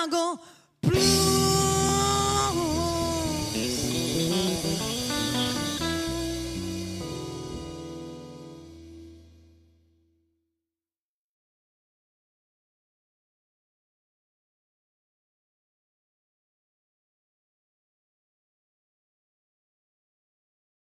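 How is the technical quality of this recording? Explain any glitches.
Nothing in the recording stood out as a technical problem on listening.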